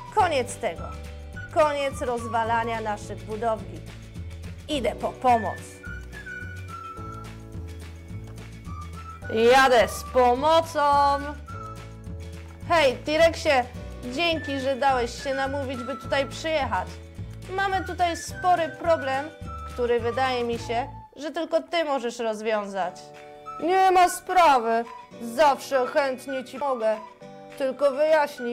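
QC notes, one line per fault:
26.61 s, CD skip: the laser lost its track, possibly from a knock or a flaw on the disc, and landed on a different turn of the spiral. The player muted for roughly 4 ms before carrying on from the new position, so the audio ticks and then resumes out of sequence, jumping forward or back by one or more disc turns. That short gap and the sudden break in continuity are what mark the skip.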